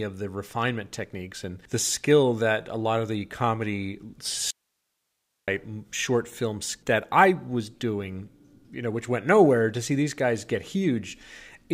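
The signal was likely lost upstream while the path after the break stayed live, giving an audio dropout to a faint residue from 4.51 to 5.48 s. The speech cuts off abruptly for nearly a second, leaving only hiss some 55 dB down, then snaps back.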